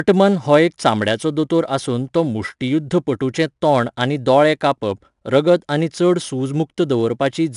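From start to end, the speech carries 4-bit ADPCM compression. Each sample is coded as a coarse step from a prediction, so a gritty hiss rides on every loud passage. Attacks sound rough. Nothing reaches above 10.6 kHz, which points to a sample rate near 22 kHz.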